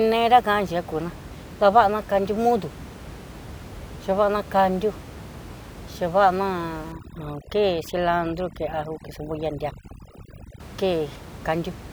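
From 6.92 s to 10.60 s, overdone noise removal sets in: the reduction is set too aggressively, shutting down individual frequency bands judged close to the noise floor, so the room noise, about 17 dB below speech, drops and breaks up into twinkling specks.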